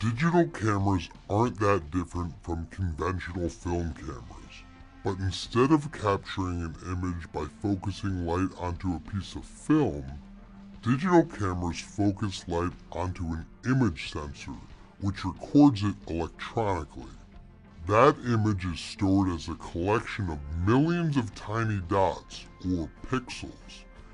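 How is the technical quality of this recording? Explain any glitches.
The recording has one fault, a wrong sample rate, and it lasts the whole clip. Everything runs at two thirds of its proper speed. Pitch drops by about seven semitones, roughly a fifth. The samples are played back slower than they were captured, with no conversion between the two rates. Speed and pitch therefore fall together. The ratio fits audio recorded at 48 kHz and played at 32 kHz. The result sounds low, heavy and dragged out throughout.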